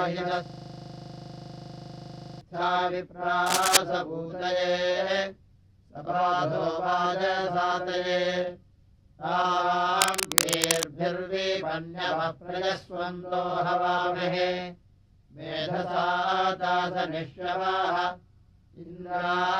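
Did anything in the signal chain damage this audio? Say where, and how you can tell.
Yes. From 0.46 to 2.41 s there is a system hang loop at the driver or buffer stage. One 40 ms piece of audio repeats exactly, 49 times, giving a rigid 25 Hz buzz-rattle. The host or driver stalled while the hardware kept replaying the same ring buffer. The repeats are identical and never fade, which separates this from codec packet-loss concealment, where repeated fragments soften, change or decay.

At 3.46 to 3.77 s and again at 10.01 to 10.92 s, dense, irregular bursts of scratching noise sit over the sound, about 5 dB above it in the first event and roughly level with it in the second. This is cable scratch noise, likely from a worn cable, connector or control in the analogue wiring, whose contact resistance is fluctuating as it is disturbed. The noise is erratic and broadband rather than periodic, so it is not a digital glitch or a buffer fault.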